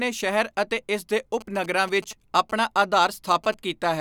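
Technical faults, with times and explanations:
1.41 to 3.54 s, GSM signalling bursts: a nearby 2G phone's short radio bursts, rectified in the audio circuit, give a galloping dit-dit-dit of short 217 Hz buzzes roughly 20 dB below the speech.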